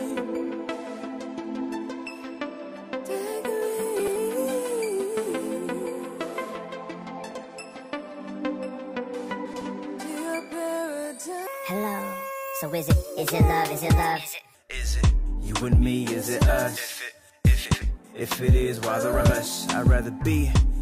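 Frames out of order at 3.99–4.17, 7.31–7.46 and 9.45–9.62 s: neighbouring blocks of roughly 60–80 ms play swapped, giving a garbled flutter. On a spectrogram they appear as abrupt vertical discontinuities. A section at the wrong speed follows from 11.47 to 14.55 s: the sound runs 1.38 times fast and about five semitones high, likely from a wrong playback clock. Its spectrogram shows harmonics shifted upward and compressed timing. Further frames out of order occur at 17.65–17.86 and 19.13–19.32 s.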